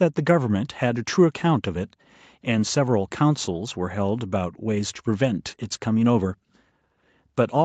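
No faults in the speech; the call microphone processing and the WebRTC call path are working as intended, with the band topping out at 8 kHz, which fits Opus set to wideband.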